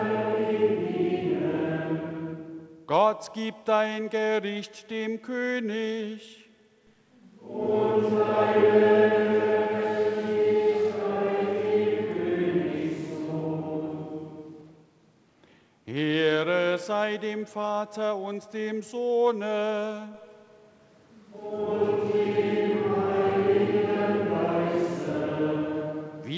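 No technical faults are audible; the sound has passed through a call path with nothing above 8 kHz, which fits a wideband G.722 codec at 64 kbps.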